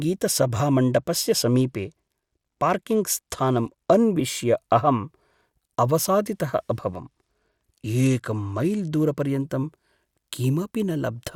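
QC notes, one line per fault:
0.94–3.99 s and 6.90–9.30 s: Bluetooth SBC bit pool drop. Twice the speech turns dull and gritty, then clears. The link was likely congested, so the phone cut the encoder's bit budget to keep audio moving. The sound fits a bit pool falling from 31 to 15, near 105 kbps. The top sub-bands get few bits or none, so treble fades. The remaining bands are coarsely quantised, which adds a rough noise until the rate recovers.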